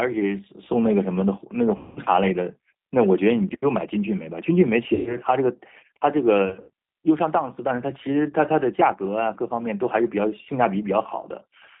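From the start, the speech carries G.729 codec damage. The sound is confined to a narrow telephone band of roughly 150 Hz to 3.7 kHz, and it has the rough, slightly synthetic texture that fits an 8 kbit/s G.729A link. That texture comes from the codec discarding the real waveform and rebuilding each 10 ms frame from a vocal tract filter, a pitch predictor and a few pulses. The damage is plainly audible across the whole clip.

VoIP packet loss concealed by the speech codec occurs three times. Each time, the decoder fills the gap by extending its last pitch and filter at falling gain, so the speech is stretched into a buzzy tone or coloured noise that fades. The first gap runs from 1.77 to 2.01 s and sounds like about 190 ms of missing audio. The second, from 4.94 to 5.18 s, points to about 120 ms lost. The third, from 6.46 to 6.70 s, is broken up rather than continuous, with dropouts totalling about 140 ms and the longest run about 70 ms.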